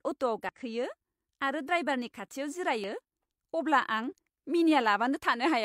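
Speech, with two short bursts of damaged data in a compressed stream: a blip at 0.49 s and another around 2.84 s, right after "आरो ड्राइभारनि खाथियाव". Corrupted bytes there make the decoder misread frames and lose sync, so you get a quick glitch before it locks back on.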